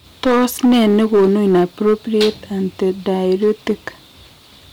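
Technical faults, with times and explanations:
Throughout, hard clipping: the speech is driven about 7 dB past what the signal chain can pass, so roughly one sample in twenty has its peak sliced flat. Those squared-off tops add high harmonics, heard as a harsh, gritty fuzz on every louder syllable.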